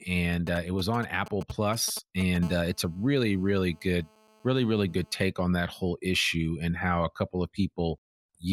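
From 0.34 to 2.37 s there are GSM signalling bursts. A nearby 2G phone is sending short groups of radio pulses, and the audio circuit rectifies them. The result is a galloping dit-dit-dit of brief 217 Hz buzzes, roughly 15 dB below the speech.

From 2.43 to 5.22 s comes a steady GSM phone buzz. The phone is now in a call, transmitting bursts 217 times a second. The rectified pulses give a hard, raspy 217 Hz buzz full of harmonics, about 28 dB down. It ends just before "on that whole issue".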